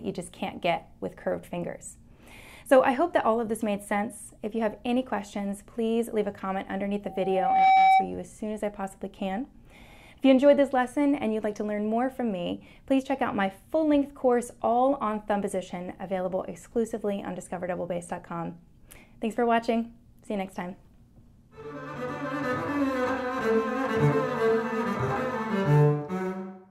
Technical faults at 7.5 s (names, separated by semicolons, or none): loudspeaker feedback squeal